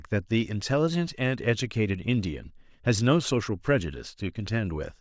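No technical faults can be heard in this speech.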